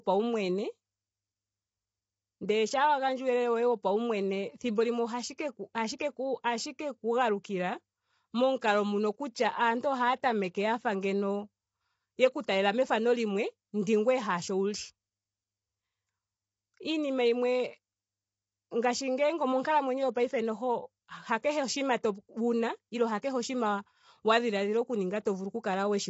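Throughout the speech, the sound is rough and grainy. Noise fills the gaps between harmonics, and nothing is heard above 7.8 kHz. This is likely low-delay AAC compression. Its short frames resolve pitch poorly, and the damage fits a bitrate near 24 kbps.

Pre-echo comes at 5.37 s, after "thimbo limwe ohashi", at 8.60 to 8.62 s, at 12.46 to 12.48 s, at 21.43 s, before "oshinima wuna", and at 23.22 s. Block-wide quantisation noise leaks ahead of each attack. A short hiss of 11 to 24 ms precedes a softened onset.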